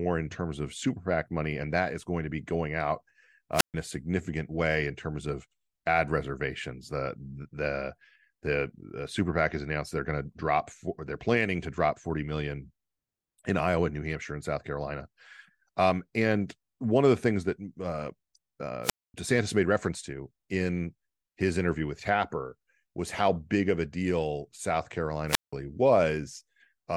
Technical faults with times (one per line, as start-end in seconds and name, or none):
3.53-3.74 wireless microphone squelch dropout
18.83-19.14 wireless microphone squelch dropout
25.27-25.53 wireless microphone squelch dropout